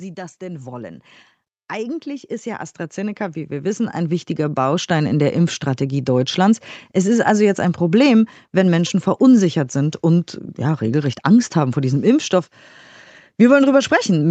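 From 0.14 to 1.12 s the automatic gain rising fault first appears: the gain control, judging the speech input too quiet, lifts level by about 4 dB, so voice and room noise swell together. A larger rise follows from 1.73 to 6.07 s, about 13 dB. On a waveform the envelope widens steadily across each span; on a spectrogram the whole band up to the 8 kHz ceiling of the call path brightens uniformly, noise floor included.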